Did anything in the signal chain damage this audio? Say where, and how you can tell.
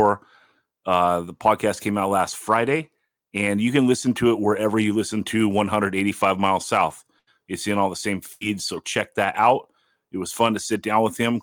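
Yes, both problems come from the network stage, with the codec covering for them. The first is a lost packet rebuilt from error correction, around 6.89 to 7.05 s and again at 8.41 to 8.43 s. In each case about 20 ms of speech came from the low-bitrate backup copy carried in the next packet, so nothing drops out, but that short patch sounds rougher and grainier than the audio around it.

The second is a burst of packet loss, at 7.19 to 7.29 s and at 8.33 to 8.43 s, right after "in all the same" and before "so check that out". Each time roughly 80 ms never arrived in time. The decoder kept the last sound going and faded it down, so you hear a brief held buzz or dying hiss. Playback then resumes, and about 80 ms of speech is simply gone.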